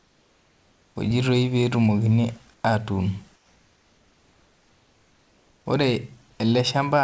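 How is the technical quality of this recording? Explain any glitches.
The recording has three gaps where the background is replaced: 0 to 0.96 s, 2.54 to 2.64 s, and 3.36 to 5.66 s. This is likely comfort noise in place of the background. During pauses the sender stops transmitting and the receiver generates synthetic noise instead. The real background gives way to a flat, featureless hiss about 3 to 4 dB quieter. The whole clip also stops at 8 kHz, which fits a wideband call codec such as G.722.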